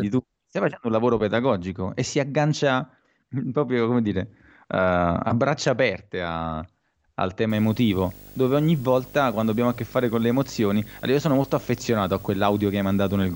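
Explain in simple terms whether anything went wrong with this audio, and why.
Video or display buzz starts at 7.50 s, just after "braccia aperte a al", and lasts to 13.35 s. A screen or video cable leaked into the audio, adding a 50 Hz buzz with fizz above it and a high whine at 15.6 kHz.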